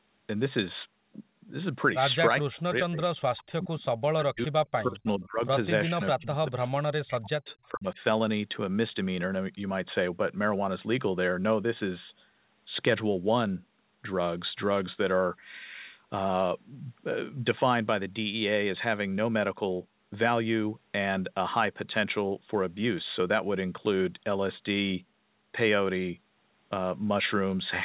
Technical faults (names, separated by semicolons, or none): speech suppressed in double talk; echo leak